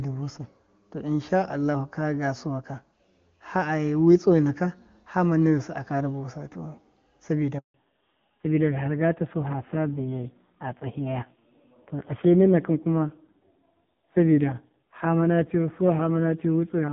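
At 7.58 s the speech cuts out abruptly and stays silent for 160 ms, until 7.74 s. This is a handover gap: the call switched networks, no speech frames arrived during the changeover, and the speech in that stretch is lost.

From 7.74 s to the end the speech sounds duller, muffled and raspy, with nothing above 4 kHz. This is a fallback to narrowband. The call dropped from HD Voice, whose AMR-WB wideband audio is clear before the gap, to AMR-NB, and the roughness fits a low rate around 5.9 kbit/s.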